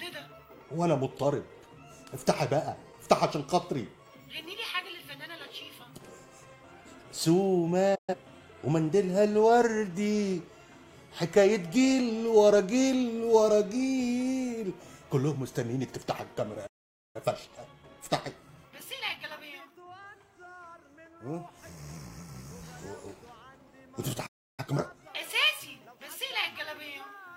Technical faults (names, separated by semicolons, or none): digital broadcast dropout; playback stall; time-compressed catch-up